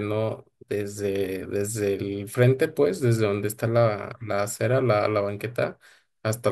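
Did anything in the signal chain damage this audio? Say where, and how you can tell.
No, nothing along the chain, from capture through conversion, transmission and playback, has left any audible damage on this speech.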